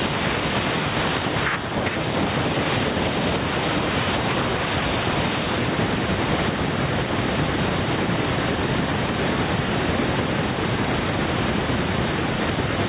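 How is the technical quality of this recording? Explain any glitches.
The recording is marred by gain pumping that runs through the whole clip. The sound is band-limited with nothing above 4 kHz, which fits a narrowband G.711 call path, and the room's background noise sits about 41 dB below the speech.

Gain pumping is audible from start to finish. The level swings by around 10 dB. The likely cause is microphone gain set far too high, with a fast limiter or compressor clamping down on each peak and releasing in the gaps. The result is squashed dynamics, with loud and quiet passages pulled close together.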